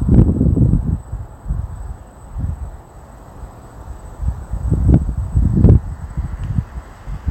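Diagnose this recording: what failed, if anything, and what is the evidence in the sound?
Short bursts of crackle land on the loudest peaks: from 0.15 to 0.22 s, at 0.74 s, at 4.94 s, and from 5.64 to 5.75 s. This is hard clipping. The level ran about 1 to 6 dB past the converter's or sample format's ceiling, so the peaks were cut flat, adding high harmonics.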